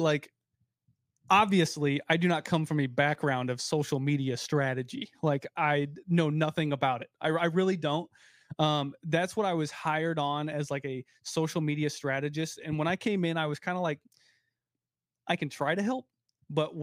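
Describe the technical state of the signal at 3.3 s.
At 3.3 s the speech signal is intact, with no audible fault at that moment.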